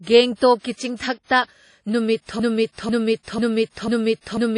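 From the start, the speech sounds smeared and washy, with a ringing edge and a hiss that swells and fades with the signal, and nothing is present above about 10.1 kHz. The damage is plainly audible throughout. This is likely WMA compression: a transform codec working in long blocks spreads its quantisation noise over tens of milliseconds around each sound and zeroes weaker detail, which fits an early WMA encoder at around 32 kbps.

At 2.40 s the speech stops moving forward and a fragment of about 0.49 s starts repeating back to back, four times, and keeps going to the end of the clip. This is a broken-record loop, and its likely cause is a player, encoder or stream that stalled and kept sending the last piece it held. Whatever should have followed 2.40 s is lost, replaced by exact copies of that same half-second.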